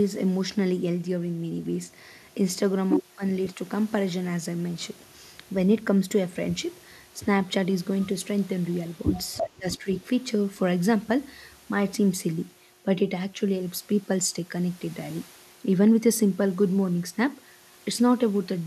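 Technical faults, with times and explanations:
9.13–9.50 s, echo leak: the far end's echo canceller likely let loudspeaker pickup through, so a copy delayed by 333 ms returns only a few dB below the speech.
9.54–9.87 s, speech suppressed in double talk: the echo canceller likely muted both talkers during overlap, so the speech dips by roughly 25 dB for about a fifth of a second.
9.72–9.77 s, echo leak: the echo canceller likely passed a brief residual again, so a faint scrap, 333 ms late and around 20 dB down, appears.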